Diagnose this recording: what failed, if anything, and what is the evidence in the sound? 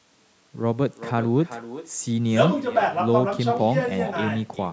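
The failure is an echo with no canceller at the far end of a call, present for the whole clip. Every phrase of the speech returns as a quieter copy, about 13 dB down, roughly 0.4 s later, thinner than the original, while the band stops at 8 kHz from the call microphone processing. The far side's loudspeaker is feeding its microphone and nothing subtracts it. Unlike room reverberation, this is a distinct delayed repeat rather than a smooth decaying tail.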